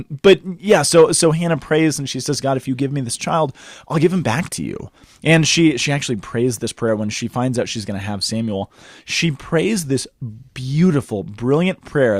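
A brief crackle on the peaks at 0.26 to 0.33 s, then again at 0.72 to 1.03 s, is hard clipping: the speech overdrove a stage by about 2 dB and about 1 dB, so peaks were cut flat, adding high harmonics.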